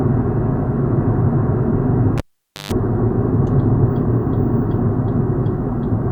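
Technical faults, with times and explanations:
2.18–2.72 s, cable pulled and plugged in: a pop, 490 ms of near silence including 130 ms of 50 Hz buzz, and another pop as a live lead is reinserted, its tip briefly catching mains hum.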